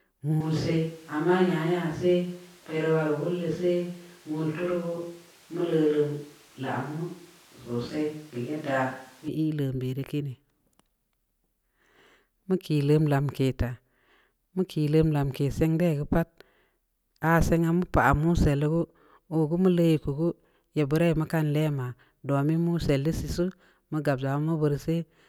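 From 0.41 s to 9.28 s the speech turns roomy and hollow with thinner bass, then snaps back; the switch to a distant microphone is likely. The level stays about the same, and the room noise sits roughly 30 dB below the speech. The abrupt changes at both ends set it apart from gradual reverb or EQ drift.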